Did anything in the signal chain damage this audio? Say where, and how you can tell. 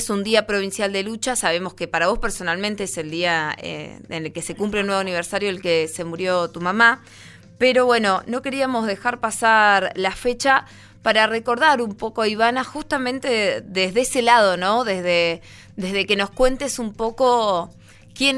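No, nothing in the signal chain damaged this audio.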